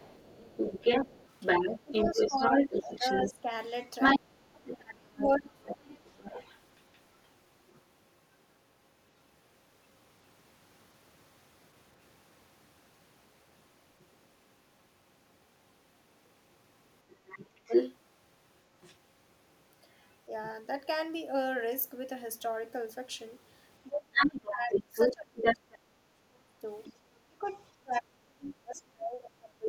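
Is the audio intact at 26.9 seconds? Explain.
No. Speech suppressed in double talk runs from 23.88 s to the end: the sound dips by up to about 30 dB for roughly 4 seconds in all, likely an echo canceller attenuating both talkers at once. From 26.84 to 26.93 s, the other side's voice is leaking through, a faint scrap about 20 dB below the speech, likely loudspeaker echo left unremoved.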